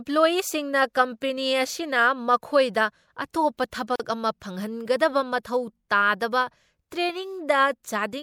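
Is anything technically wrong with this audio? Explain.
Yes, there are two faults.

Sample clock jitter runs throughout. Timing wander of roughly half a microsecond adds a faint hiss, around 50 dB down, that swells on loud, bright speech and vanishes in pauses. A spectrogram shows a diffuse high-frequency haze tracking the speech.

A gap at a join of encoded pieces falls at 3.96–4.00 s. A 40 ms gap, left by the untrimmed encoder delay and padding, interrupts the speech, with its edges smeared by the codec. It appears as a flat waveform stretch and a blank vertical stripe.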